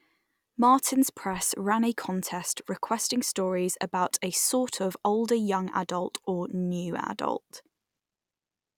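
No technical faults are audible anywhere in this speech.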